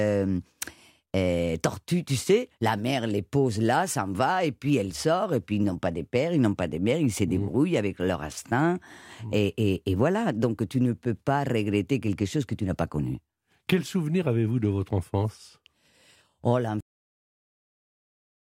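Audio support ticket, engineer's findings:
Cut-off end: final buffers never written or played out; capture/playback stopped before flush. Speech halts mid-sound at 16.81 s, no decay or tail, drops straight to digital silence held through the end of the file. Probable component: recorder/output buffer handling on stop.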